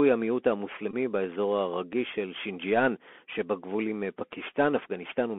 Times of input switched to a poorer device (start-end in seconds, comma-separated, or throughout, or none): none